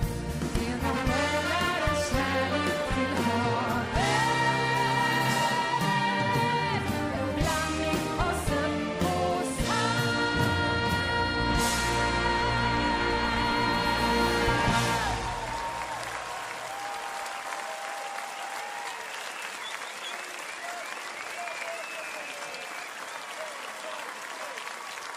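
No technical faults occur at any point in this audio.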